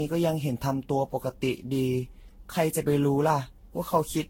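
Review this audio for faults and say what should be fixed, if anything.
Generation loss is present throughout the speech clip. It sounds swirly, smeared and hollow, attacks blur, and nothing is present above 16.7 kHz. The likely cause is roughly fifteen lossy re-encodes, each quantising on a shifted frame grid, so noise and spectral holes pile up. The sound fits Vorbis near 64 kbit/s. To prevent it, keep a lossless master and encode to a lossy format only once, as the final step.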